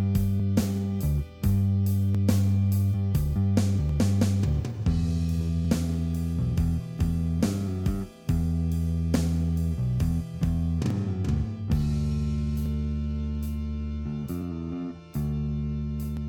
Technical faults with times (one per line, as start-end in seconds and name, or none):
0.40-16.17 clock drift buffer slips